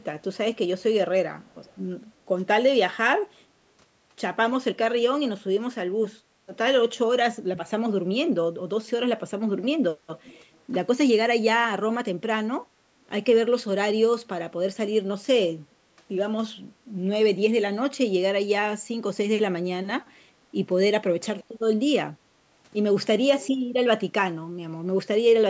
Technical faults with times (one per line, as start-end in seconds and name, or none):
1.41-1.77 echo leak
10.23-10.59 echo leak